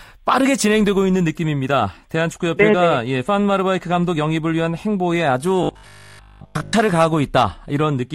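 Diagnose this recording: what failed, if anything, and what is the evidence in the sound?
Robotic sound from repeated short buffers, buffer stage, 5.63 to 6.73 s: a rigid 50 Hz buzz, likely a replayed 20 ms block, showing as evenly spaced 50 Hz harmonic stripes.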